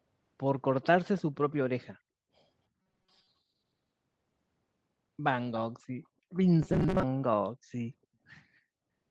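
From 2.82 to 3.27 s and again from 6.63 to 7.04 s, the speech turns into a rigid metallic buzz near 188 Hz. This is robotic sound from repeated short buffers, likely caused by roughly half the audio being replaced with looped 5 ms fragments.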